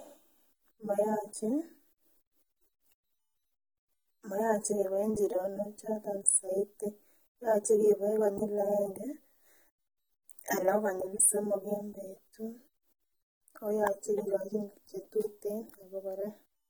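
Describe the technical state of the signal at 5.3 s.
At 5.3 s the speech sounds dull and smeared, with a warbling, fizzy edge on sibilants and nothing above 19.3 kHz, as throughout the clip. The likely cause is AAC compression: AAC-LC quantising its frequency lines coarsely, which fits a bitrate near 32 kbps.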